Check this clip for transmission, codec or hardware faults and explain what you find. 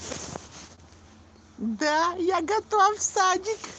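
One transmission fault shows up in the speech: a short concealed packet loss between 0.75 and 0.79 s. About 20 ms of audio never arrived in time. The decoder bridged roughly 18 ms of that gap by extending the preceding sound before blending back into the real signal. The result is a brief smear or wobble, and any short consonant there can drop out. On a spectrogram the harmonics or noise run on unnaturally flat across the gap and then blur at the rejoin. Throughout, the call codec's band limit appears as a sharp ceiling near 8 kHz.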